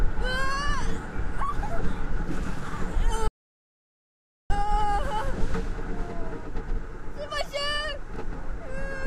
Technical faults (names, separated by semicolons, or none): audio dropout to silence